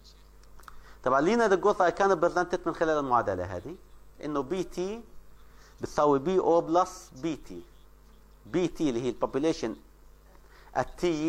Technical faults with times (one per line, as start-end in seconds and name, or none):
none